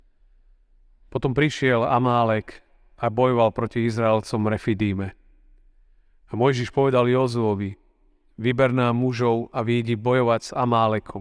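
A speech recording, and nothing is technically wrong with it.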